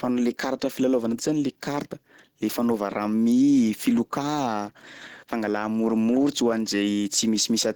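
Across the whole clip the speech sounds hoarse and grainy, with a rough, noisy sheen on the upper frequencies rather than any swirling or holes in the spectrum. Content still reaches up to about 20.1 kHz, so the bandwidth has not narrowed. The likely cause is Opus compression in hybrid mode, at a rate that fits roughly 16 kbps. The lower band is coded as speech, and the thinly funded upper bands are filled in with folded or noise-like energy.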